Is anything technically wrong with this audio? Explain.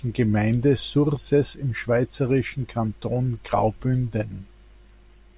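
No, nothing in this speech recording stood out as a technical problem on listening.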